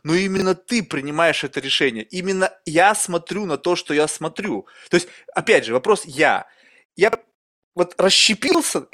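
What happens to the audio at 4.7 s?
Nothing goes wrong at 4.7 s; the speech runs on intact through that moment, with no dropout, click, glitch or other fault to be heard there.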